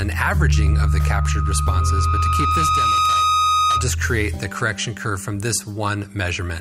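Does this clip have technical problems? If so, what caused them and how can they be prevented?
Yes. Loudspeaker feedback squeal runs from 0.54 to 3.91 s. A 1.2 kHz tone swells over about two seconds until it matches the sound's level. The microphone is re-amplifying its own loudspeaker. Keep microphones out of the speaker's path and lower gain, or notch 1.2 kHz.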